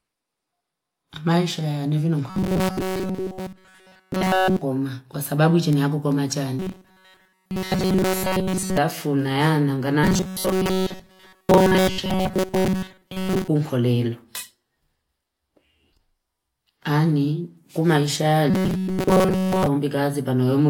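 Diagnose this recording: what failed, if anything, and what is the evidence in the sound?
Speech becomes a rigid 188 Hz metallic buzz at 2.30–4.61, 6.59–8.77, 10.04–13.48 and 18.50–19.66 s. This is robotic sound from repeated short buffers, likely a starved buffer looping chunks of about 5.3 ms.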